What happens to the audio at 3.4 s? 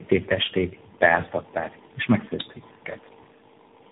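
At 3.4 s you're hearing tandem speech coding, which runs through the whole clip. The speech sounds like it has passed through about three low-rate speech coders in a row, each re-coding the last one's damage. It comes out rough, muffled and warbly, with nothing above 3.8 kHz.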